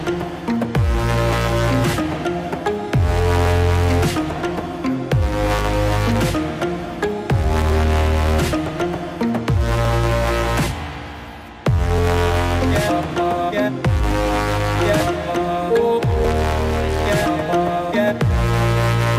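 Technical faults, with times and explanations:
1.33 to 18.38 s, clock drift buffer slips: a regular click or pop recurs every 2.13 s, around ten in all. The likely cause is two devices running on separate clocks that differ by roughly 300 ppm. The buffer between them slowly fills or empties until a few dozen samples are dropped or repeated, and each slip breaks the waveform into an audible click.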